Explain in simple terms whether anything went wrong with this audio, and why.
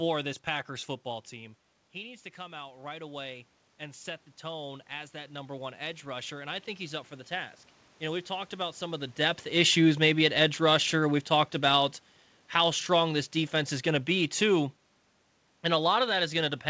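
Automatic gain rising, from 0.68 to 7.59 s: the talker moved back from the microphone around 1 s, so the level dropped. The automatic level control responded by slowly turning itself up, and the voice and the room noise behind it swelled together over several seconds.

Automatic gain falling, from 9.49 to 12.03 s: the talker moved around 9 s. The level control then eased itself back down, and the voice sinks gradually with its background, between "some of the depth" and "how strong this defense".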